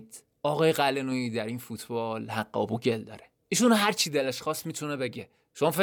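No technical faults can be heard anywhere in the recording.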